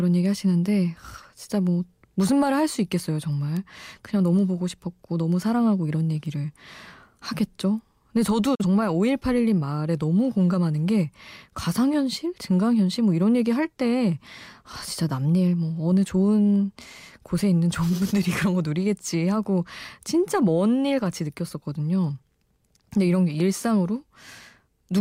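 At 3.57 s and again at 6.26 s the speech carries a bit error spike: a single sample's value jumps by a power of two and immediately returns, as if one bit flipped in memory or on a digital link. Each is heard as an isolated, broadband tick unrelated to the speech.

At 8.55 s a digital broadcast dropout occurs. The receiver stopped getting valid data and muted, fading out over 8 ms, then restored sound by 8.65 s. The gap fits a single lost frame of about 43 ms, and the speech sent during it is gone.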